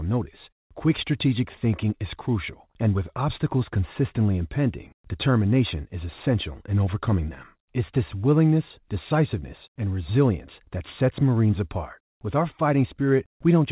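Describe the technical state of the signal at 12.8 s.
At 12.8 s the speech is intact, with no dropout, glitch or distortion, only the call path's normal narrow band that stops at 4 kHz.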